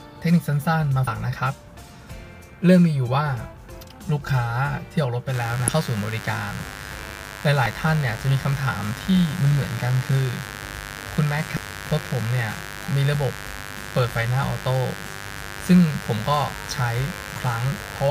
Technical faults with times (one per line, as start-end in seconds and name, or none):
1.07 damaged data in a compressed stream
5.31-18.11 mains buzz
5.68 damaged data in a compressed stream
7.65 damaged data in a compressed stream
11.57 damaged data in a compressed stream